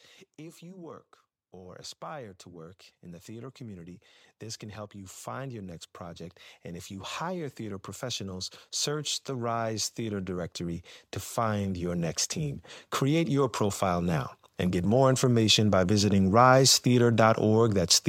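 From 0.37 s to 4.07 s the speech and the room noise behind it swell together, climbing by about 6 dB; then from 4.59 s to 14.28 s a second, longer swell lifts everything by about 15 dB. This is automatic gain rising: the gain control judged the input too quiet and raised its level step by step, so voice and background grow at the same slow rate rather than the talker getting louder.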